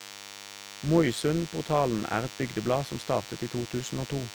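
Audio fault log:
throughout, DECT cordless phone buzz: a thin, steady buzz runs beneath the speech from start to finish, sitting about 15 dB below it. A DECT handset or base station close by transmits a brief radio burst 100 times a second. The audio circuitry rectifies each burst into a sharp click, and that chain of clicks sounds as a 100 Hz tone with a dense stack of harmonics. The harmonics give it its edgy, buzzing quality rather than a smooth hum.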